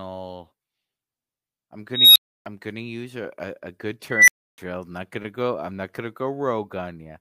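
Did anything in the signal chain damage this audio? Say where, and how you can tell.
Yes, an unstable filter in the call processing blows up twice. At 1.93 s a tone near 4 kHz swells over 0.23 s, clips and leaves 0.3 s of silence before "gonna use a a". At 4.10 s, after "a a a good", a tone near 2 kHz does the same in 0.18 s. A recursive filter with bad coefficients grows until it overflows, then resets.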